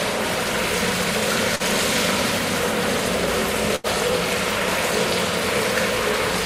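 A recording of everyday sound with three faults. From 1.36 s to the end, something, likely interference from nearby equipment or a faulty connection or power supply, injects a train of clicks: about 6.4 similar pulses per second at an uneven pace. They peak well above the sound itself and tick over it, in quieter stretches too. At 1.55 to 1.63 s there is short concealed packet loss. Roughly 40 ms of the stream failed to reach the decoder in time, and the receiver bridged the gap by extending the preceding sound for about 42 ms before blending back. The result is a brief smear or wobble where a short event may vanish. At 3.76 to 3.87 s a burst of packet loss removes about 80 ms. The receiver fills that span by continuing the last sound while fading it, giving a held buzz or dying hiss, and the audio then resumes further on with that stretch missing.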